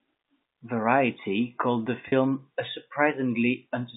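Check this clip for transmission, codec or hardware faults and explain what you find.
There is one transmission fault, a brief packet loss with pitch repetition from 2.08 to 2.12 s. For about 40 ms the sound is briefly held and turns slightly buzzy, as if one pitch cycle were stuck and repeating. The receiver bridged a 40 ms gap, which fits two 20 ms packets, by looping the last pitch period it had. Because the gap is shorter than the fade-out, the loop never decays to silence before real audio resumes, inside the telephone band of about 200 Hz to 3.7 kHz.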